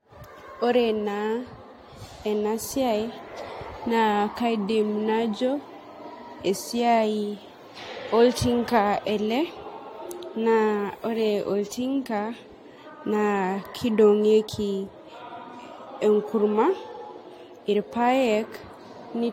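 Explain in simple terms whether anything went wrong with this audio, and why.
Generation loss, throughout the whole recording: the speech sounds swirly, smeared and hollow, with blurred starts of sounds and nothing above about 16.6 kHz. The likely cause is repeated squeezing by a lossy codec, about three times over, with each pass adding fresh damage.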